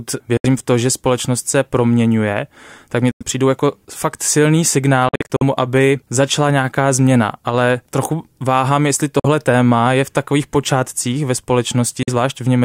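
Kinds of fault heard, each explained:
Bluetooth dropout: speech cuts out five times, likely from lost wireless packets, leaving empty vertical bands on the spectrogram and flat gaps in the waveform.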